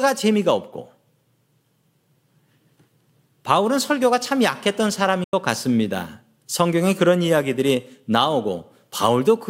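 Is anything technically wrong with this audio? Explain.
Yes, there is one fault, most likely a Bluetooth dropout, at 5.24 to 5.33 s. Packets carrying the audio apparently missed their delivery window to the headphones and were discarded, so the playback had nothing to render. The result is a sudden hole of about 87 ms of silence in the speech, a gap that points to roughly six lost packets. When sound returns it picks up further along, as though it had kept playing through the gap.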